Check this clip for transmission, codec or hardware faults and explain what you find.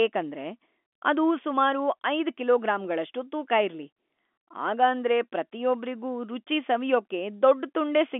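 No faults found.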